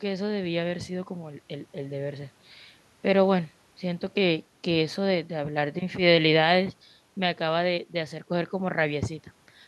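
Nothing in this speech recording stands out as a technical fault, so there's nothing to flag here.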